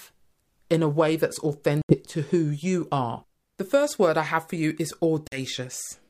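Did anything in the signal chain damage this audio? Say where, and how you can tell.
Yes, two short holes that most likely come from a Bluetooth dropout on the wireless link to the headphones, so the playback stage. The speech cuts to silence from 1.82 to 1.97 s and again from 5.28 to 5.39 s, then picks up further along as if it had kept playing underneath. Packets simply arrived too late and were thrown away, skipping about 76 ms of sound the first time and about 46 ms the second.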